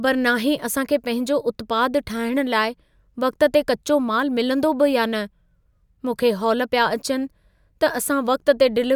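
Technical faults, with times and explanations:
Nothing in this speech recording stood out as a technical problem on listening.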